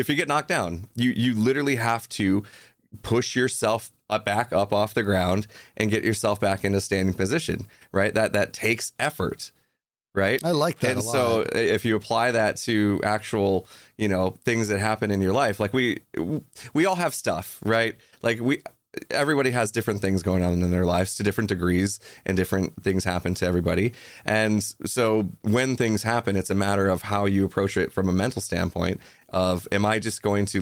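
Nothing in the speech stood out as a technical fault on listening.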